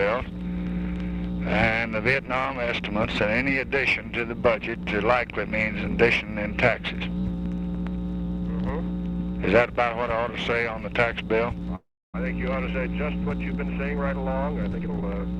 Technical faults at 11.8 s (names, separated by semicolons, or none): call audio freeze